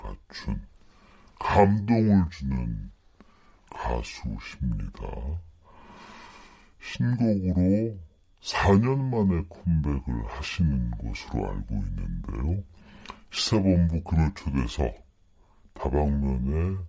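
From start to finish the speech runs slow and low, the mark of a wrong sample rate: the samples are being clocked out more slowly than they were captured, with no conversion between the two. The ratio is two-thirds, which fits 24 kHz audio played at 16 kHz, so everything lasts 1.5 times as long and drops about 7 semitones. On a spectrogram, harmonics and formants sit lower than normal and syllables look stretched; the waveform shows correspondingly drawn-out cycles.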